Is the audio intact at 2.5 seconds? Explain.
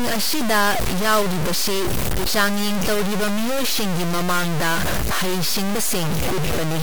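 No, at 2.5 seconds the speech is heavily grainy, as it is throughout the clip: it sounds like low bit depth without dither, likely about 3 bits, truncated. The rounding error tracks the voice, so the grit is roughly as loud as the speech and quiet bits sputter or vanish.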